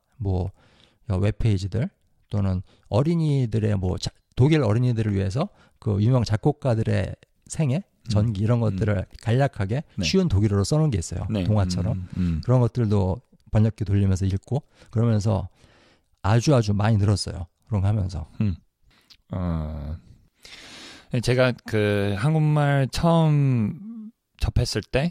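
Clock drift buffer slips from 0.29 to 24.9 s: clicks every 0.6 s, likely two clocks about 300 ppm apart, dropping or repeating samples.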